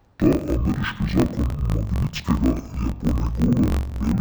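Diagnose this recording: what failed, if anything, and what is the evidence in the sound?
Interleaved audio read as planar throughout, at the sample-format conversion stage: each 21.77 ms block is split into halves, dropping the speech an octave and making it choppy at 45.9 Hz.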